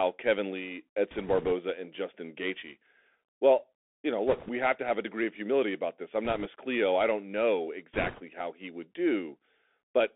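The Bluetooth CVSD headset codec runs throughout this speech clip: the sound is confined to roughly 250 Hz to 3.5 kHz, which fits a 64 kbps one-bit delta stream. Its adaptive step lags on loud, bright sounds, so sibilants turn scratchy over a granular hiss. Bit errors on a Bluetooth voice link cause rushing, crackly bursts at 1.11–1.52 s, 4.28–4.50 s (after "you know", before "have to have a"), 6.25–6.47 s (after "humility about this I'm") and 7.93–8.22 s (after "I don't know", before "how he would"). They fit error rates of a few percent. Because each flipped bit carries little weight and its effect fades, no sharp clicks result.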